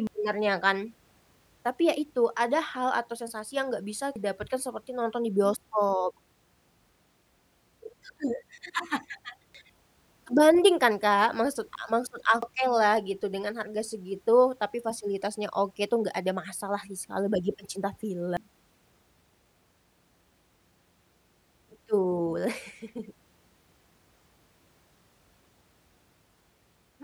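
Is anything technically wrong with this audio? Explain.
Yes. There's damaged data in the compressed stream, heard as five short glitches in the speech at 0.07, 4.16, 9.55, 12.43 and 18.37 s. At each spot a bit of the encoded data is corrupted, so the decoder can't read that frame properly, loses sync and hunts for the next valid frame header before carrying on. Each one comes through as a quick chirp, squawk, click or short hole.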